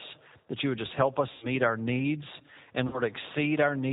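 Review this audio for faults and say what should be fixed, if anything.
The whole clip carries G.729 codec damage at 8 kbit/s. Nothing above 4 kHz survives, and the speech sounds rough and synthetic. Use a wideband codec such as Opus instead.

VoIP packet loss concealed by the speech codec occurs twice. At 1.32–1.47 s, after "you would just help", about 100 ms is lost. At 2.87–3.01 s, after "our needs and", about 60 ms is lost. The decoder stretches its last frame into a fading buzzy tone or coloured noise. Recovery is slow because each frame builds on the one before. Add jitter buffering and forward error correction to reduce these losses.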